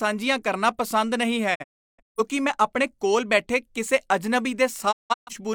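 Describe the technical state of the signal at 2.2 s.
At 2.2 s the signal is just coming back from a digital broadcast dropout spanning 1.54 to 2.20 s, with speech resuming on "ਮੈਂ ਆਪਣੇ ਕੋਲ ਬੈਠੇ". The receiver muted while frames failed, leaving several silent holes that total about half a second, the longest 341 ms, with 20 ms fades at the edges. The waveform shows flat gaps with short ramps, and the spectrogram shows blank vertical bands across all frequencies. The pattern points to about a dozen lost frames, and that audio is gone.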